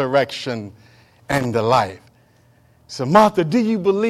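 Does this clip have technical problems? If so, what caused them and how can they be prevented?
Yes: loose connector crackle from 1.31 to 1.45 s, just before "the life", as a worn or dirty contact made and broke while moving, chopping the signal into an irregular scratchy burst rather than a single clean click or gap. Reseating, cleaning or replacing the cable and connector prevents it.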